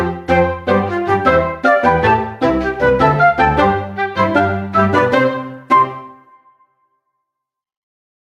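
Throughout the clip the gain ducks under each loud sound, a breathing swing of around 5 dB that leaves the dynamics squashed. This gain pumping is likely from input gain set too high, with a fast limiter clamping down on peaks.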